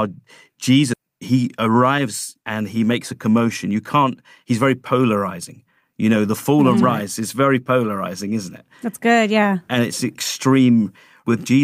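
At 0.93 to 0.95 s a skip ahead drops about 0.4 s of speech. The receiver discarded that stretch and spliced later audio almost directly, leaving an abrupt waveform seam with no gap.

Jitter buffer speed-up follows from 1.67 to 2.06 s, just before "and he", at 111% (about 50 ms removed), and again from 2.92 to 4.52 s, between "and he" and "very polarizing", at 107% (about 100 ms). An overfull buffer repeatedly trimmed pitch periods, so speech sounds hurried at unchanged pitch. Spectrogram harmonics keep their spacing while syllables compress in time.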